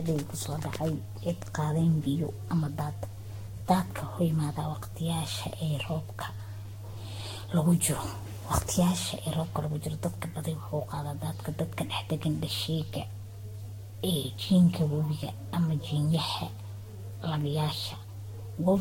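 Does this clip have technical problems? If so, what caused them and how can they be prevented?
Yes. The speech shows generation loss from start to finish. It sounds swirly and hollow, with smeared consonant attacks and nothing above 16.6 kHz. That is more damage than one modest encode would cause. The likely cause is repeated lossy re-encoding, about ten times, with a codec that sounds like Vorbis near 64 kbit/s. Each pass quantises on a shifted frame grid, so noise and spectral holes pile up. To prevent it, keep a lossless master and encode to a lossy format only once, at the final step.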